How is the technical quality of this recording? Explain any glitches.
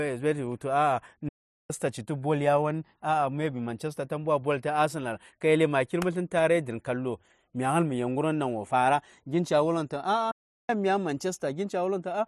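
The recording has two glitches of one kind. Playback stall, from 1.28 to 1.70 s and from 10.31 to 10.69 s: the speech cuts out mid-flow into silence for about 0.41 s and then 0.38 s, likely because the player ran dry of data or its thread was held up until it recovered.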